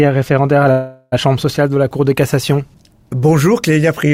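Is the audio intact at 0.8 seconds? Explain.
No. At 0.8 seconds the clip is inside a call audio freeze that runs from about 0.71 to 1.14 s. The last sound before the stall is stretched into a fading buzz or hiss for about 406 ms, ending in roughly 10 ms of silence, and then the audio resumes where it left off. Nothing is lost, but everything after the freeze arrives about 406 ms late. The likely cause is delayed packets draining the jitter buffer, so the receiver filled the gap itself.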